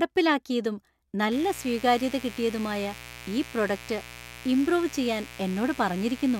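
A poorly shielded or switching-noisy power path lets sharp spikes from the 60 Hz mains into the signal at twice the mains frequency, and from 1.32 s until the clip ends at 6.40 s this shows up as mains buzz under the speech. The spikes carry harmonics of 60 Hz reaching into the kilohertz range, so instead of a smooth hum there is a steady, raspy buzz, roughly 20 dB below the speech.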